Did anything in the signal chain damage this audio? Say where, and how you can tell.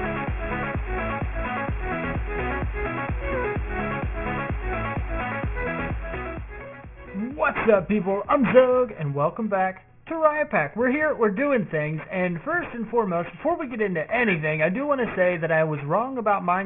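Yes. Aliasing runs through the whole clip at the sample-rate conversion stage. Content above 3 kHz folds back to wrong, gritty pitches around 15 dB below the signal, pointing to a downsample from 44.1 kHz to about 6 kHz without an anti-aliasing filter first.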